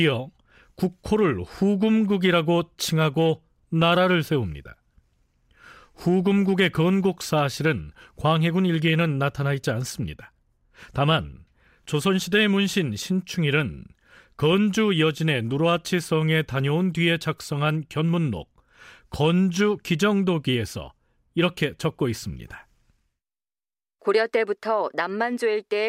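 Nothing technically wrong turns up anywhere in this speech recording, so there's no fault to point to and no cause to chase.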